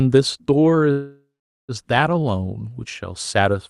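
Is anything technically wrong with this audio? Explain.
Yes, there is a call audio freeze from 0.91 to 1.72 s. Packets were likely held up in transit, so the jitter buffer ran dry and the receiver had to invent sound to cover the hole. It stretched the last audio into a fading buzz or hiss for about 0.77 s, about 0.43 s of which is silent. When delivery resumes, the speech picks up exactly where it stopped. Nothing is lost, but everything after it arrives about 0.77 s later. The passage through the call codec, which sounds like Opus, is audible as its usual coding noise and a top end that stops near 12 kHz.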